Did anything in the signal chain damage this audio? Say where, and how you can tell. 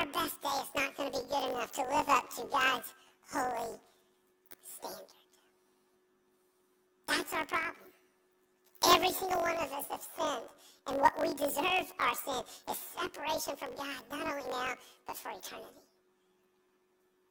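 Yes. Planar audio read as interleaved, at sample-format conversion, throughout: the speech is an octave high with a 46.9 Hz flutter, consistent with 1024-sample blocks. Spectrograms show comb-like stripes every 21.33 ms.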